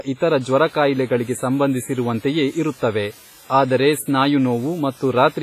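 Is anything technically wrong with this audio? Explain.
Yes. Two faults are audible in this speech clip.

Throughout, the sound rings and smears, with a washy hiss that rises and falls with the speech, and nothing is present above 15.3 kHz. The likely cause is heavy WMA compression. Its long transform blocks spread quantisation noise over tens of milliseconds and drop weak detail, which fits a bitrate around 24 kbps.

From 0.49 s to the end, a constant, even hiss sits about 25 dB below the signal. This is low bit depth with dither, pointing to roughly 7 bits. Dither added before rounding turns the coarse rounding error into steady white noise with no distortion. Unlike the codec's hiss, this one does not follow the speech.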